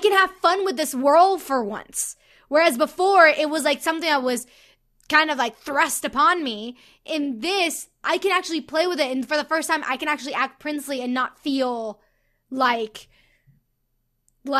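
Nothing in the speech here points to a technical fault at any moment, so there's no timeline of problems to walk through.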